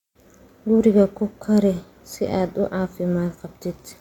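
Nothing in this recording stands out as a technical fault; it's just someone talking, with no glitches to point to anywhere along the way.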